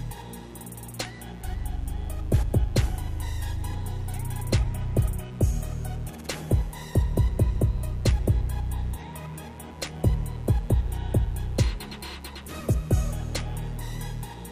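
A steady, raspy mains buzz runs under the sound from start to finish, sitting roughly 25 dB below it. Sharp switching spikes from a dimmer, a rectifier or a missing shield enter 120 times a second, twice per 60 Hz cycle, spreading harmonics up to several kHz.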